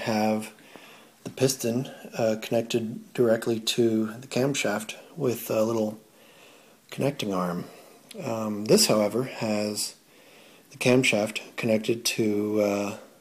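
Hard clipping at 8.71 to 8.91 s and again at 10.87 to 11.09 s: the signal overruns what a stage can pass by about 4 dB, then about 3 dB, so peaks are sheared flat, adding high harmonics heard as brief harsh crackle.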